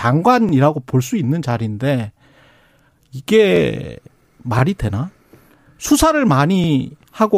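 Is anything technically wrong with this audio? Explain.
Yes, there's an overlapping chunks problem in this speech. At 0.49, 1.51, 3.56, 4.59, 5.61 and 6.64 s you hear a brief stutter or click, each lasting about 25 ms. The audio seems to be handled in 1 s blocks, and each new block starts slightly before the previous one finished. That means the last 25 ms or so at every join gets played twice, and you hear a little hiccup about once a second.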